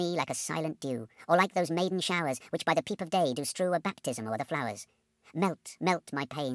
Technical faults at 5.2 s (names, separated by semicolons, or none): wrong sample rate